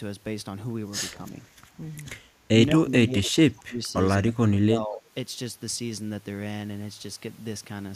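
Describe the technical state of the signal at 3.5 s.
At 3.5 s the speech is caught in a stretch of speech suppressed in double talk running from 2.8 to 3.82 s. The level falls in pieces, about 30 dB at its deepest, and around 0.7 s of that span is affected. The likely cause is an echo canceller that, with both sides talking, mistook this talker for loudspeaker echo and attenuated both.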